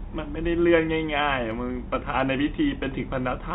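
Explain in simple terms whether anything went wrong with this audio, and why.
Nothing went wrong: the speech came through an ordinary telephone-grade call connection that keeps only sound below 4 kHz, so its narrower, phone-like tone is simply how such a call sounds, not a fault.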